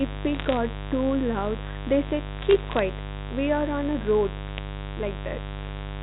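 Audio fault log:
Throughout: mains buzz. A steady, raspy buzz sits under the whole speech clip at roughly 10 dB below the speech. It is built on 50 Hz mains. Sharp switching spikes, likely from a dimmer, rectifier or missing shield, repeat twice per mains cycle. Their harmonics stack up into the kilohertz range. That spread of harmonics makes the sound harsh rather than a smooth hum.
0.35–0.57 s, 2.39–2.79 s and 4.48–4.58 s: bit errors on a digital phone line. Three bursts of crackle land on the speech. The middle burst is the longest and the last is the shortest. The error rate is low, a fraction of a percent. Each flipped bit corrupts a single sample. A hit on the sign or a high-order bit throws that sample far off and makes a sharp tick. The G.711 A-law telephone path keeps the band below 4 kHz.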